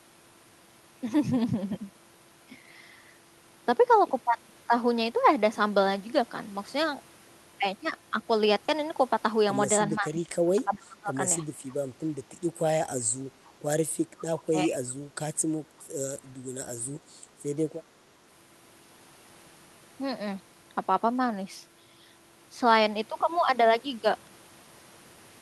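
From 9.95 to 11.13 s the speech sinks, with about a second of audio affected and dropping by around 20 dB at its deepest. This is speech suppressed in double talk: with both sides likely talking at once, the echo canceller could not tell this talker from the returning loudspeaker sound, so it turned everything down together.

At 13.02 to 13.06 s and again at 13.48 to 13.53 s, faint scraps of a delayed copy of the speech slip through, trailing the original by 373 ms and sitting very low, roughly 30 to 40 dB under the main speech. This is echo leak, and its cause is likely a far end playing the call over a loudspeaker whose echo canceller left part of the microphone pickup in place and sent it back.

The same double-talk suppression returns briefly at 14.14 to 14.27 s, with the speech dipping by about 20 dB, and at 14.46 to 14.78 s, where it drops by about 15 dB. Both dips likely come from the canceller again clamping down on this talker while the other side is speaking.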